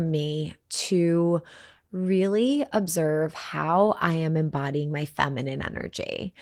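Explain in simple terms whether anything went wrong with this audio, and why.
Nothing went wrong with this speech recording: the Opus voice compression it passed through left only light traces, and no technical fault can be heard anywhere in it.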